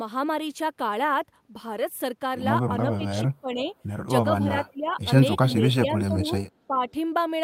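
From 2.82 to 3.06 s the speech dips by about 10 dB. It drops again by about 15 dB at 3.24 to 3.74 s and 4.40 to 5.07 s. Shallower dips of about 10 dB follow at 5.56 to 6.35 s and 6.68 to 6.93 s. This is speech suppressed in double talk. The likely cause is an echo canceller that heard both sides at once, took the talker for loudspeaker echo, and turned the signal down. Each dip sounds like the talker briefly fading away.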